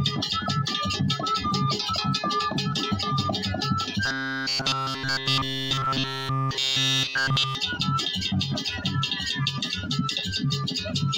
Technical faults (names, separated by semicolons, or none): robotic sound from repeated short buffers